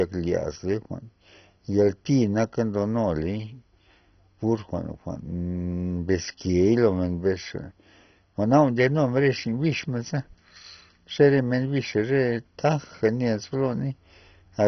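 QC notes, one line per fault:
Throughout, MP2 compression, heavy: the speech sounds dull and muffled, with nothing above about 6.1 kHz, and a gurgling, granular roughness sits on the speech. This is likely MPEG Layer II coding at a very low rate, around 32 kbps by the sound of it. Starved of bits, the coder shuts off its upper sub-bands entirely, lets bands flicker on and off from frame to frame, and quantises the remaining bands coarsely.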